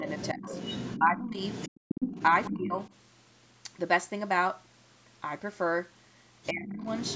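Speech recorded through a call's microphone processing, with nothing above 8 kHz and the deepest bass trimmed. The talker's level dips in short bursts at 0.0–0.48 s, 0.99–1.38 s, 2.3–2.78 s and 6.51–6.86 s. The drops range from roughly 10 dB to about 20 dB. This is speech suppressed in double talk, likely because the echo canceller turned everything down while both sides spoke. The other side's voice is also leaking through, at 0.07–2.89 s, 6.43–6.49 s and 6.8–7.16 s. It sits roughly 10 to 25 dB under the speech. The likely cause is loudspeaker echo that the canceller failed to remove.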